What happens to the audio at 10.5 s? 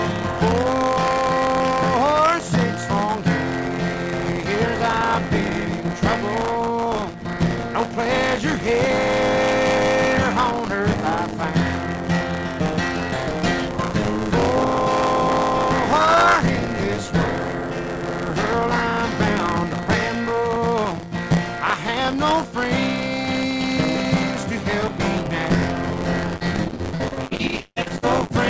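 At 10.5 s a steady robotic buzz rattles at 100 Hz over the sound. This buffer tearing runs through the whole clip: the writer and reader of the ring buffer have slipped, so roughly a tenth of each buffer replays audio about 30 ms stale, with hard joins on both sides.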